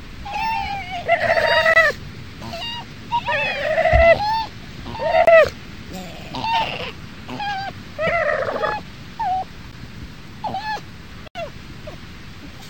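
At 0.33–0.36 s, 2.60–2.63 s and 8.06–8.09 s, the sound jumps ahead with a brief chirp or noise burst lasting about one 26.1 ms frame. This is likely a broken MP3 bit reservoir: after frames were lost, the next frame reached back for its data and decoded bytes from the wrong frame.

Short holes occur at 1.74–1.76 s and 5.25–5.27 s (23 ms each, which fits a 1024-sample buffer), a tick at 9.71 s (12 ms) and a short hole at 11.28–11.35 s (75 ms). These are blocks of digital silence, where samples were zeroed and restored abruptly with no fade.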